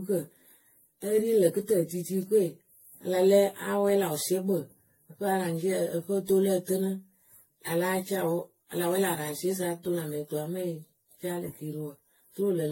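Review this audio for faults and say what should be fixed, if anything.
Generation loss runs through the whole clip: the speech was likely decoded and re-encoded many times, perhaps around seven, with a lossy codec that sounds like AAC-LC near 64 kbit/s. Each pass requantises on a shifted frame grid, so the audio turns swirly, smeared and hollow, consonant attacks blur, and nothing remains above 16.6 kHz. To prevent it, keep an uncompressed or lossless master and encode to the lossy format only once, at the final delivery stage.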